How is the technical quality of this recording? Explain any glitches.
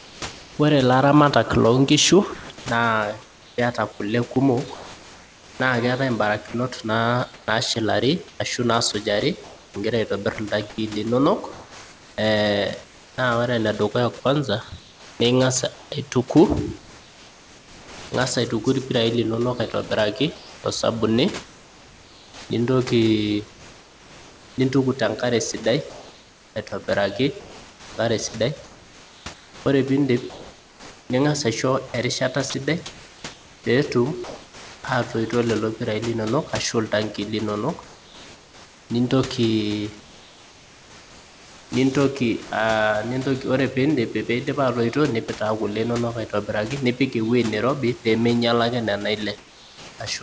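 The recording has several voice-detector faults. The speech band stops at 8 kHz, which points to a wideband call codec such as G.722, and room noise sits about 23 dB below the speech.

From 0.0 to 10.8 s and from 12.8 to 34.8 s, the sound is chopped by the voice detector. Roughly 2.8 s and 8.8 s of quiet speech edges were likely swapped for comfort noise, so the speech sounds choppy.

From 40.0 to 41.7 s and from 49.4 to 50.0 s, comfort noise replaces the background. When transmission pauses, the receiver likely substitutes a featureless synthetic hiss that is about 3 dB and 2 dB quieter than the real background.

At 49.98 s, the onset is clipped by the voice detector. It probably reacted late, so 20 ms of the start went unsent and the sound begins abruptly without its soft attack.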